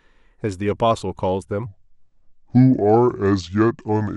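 A speech recording with a section at the wrong speed from 1.66 s to the end: playback drops to 0.716 times the original rate, so the voice turns slow and deep, about five semitones lower. This is likely a clock or sample-rate mismatch. On a spectrogram the harmonics and formant bands step down abruptly at 1.66 s and syllables stretch wider. The waveform envelope slows accordingly.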